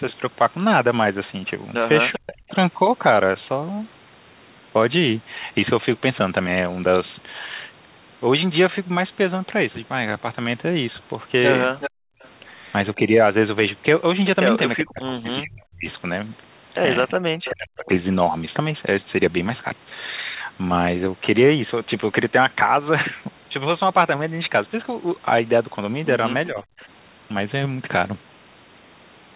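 Speech suppressed in double talk at 2.15 to 2.46 s: the speech dips by roughly 40 dB over about 0.3 s. The likely cause is the echo canceller turning down both sides while they overlapped.

Echo leak at 2.5 to 2.55 s: a brief copy of the speech returns 387 ms late, about 25 dB down. It is likely loudspeaker sound the far-end canceller failed to remove.

Echo leak at 11.8 to 12.29 s: a louder delayed copy, about 10 dB below the speech, again 387 ms behind and likely uncancelled loudspeaker pickup.

Background gated by the echo canceller at 11.9 to 12.22 s: the room sound drops by about 40 dB for roughly 0.3 s while the loudspeaker plays, then returns.

Speech suppressed in double talk at 12.95 to 17.89 s: the speech cuts out in pieces totalling roughly 1.5 s, up to around 40 dB deep, likely from the canceller suppressing overlapping talk.

Echo leak at 17.09 to 17.51 s: inside that stretch, a 387 ms delayed copy sits about 15 dB down, likely leaked loudspeaker echo.

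Speech suppressed in double talk at 26.48 to 26.8 s: a milder dip of about 10 dB lasting roughly 0.2 s, likely from the same double-talk suppression.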